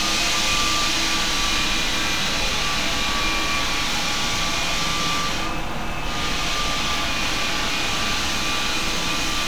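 A recording of sounds with four sharp single clicks, at 2.26, 3.99, 6.08 and 8.97 s, each a thin vertical line in the spectrum. They're most likely dropped samples, under a millisecond lost each time, so the waveform jumps abruptly.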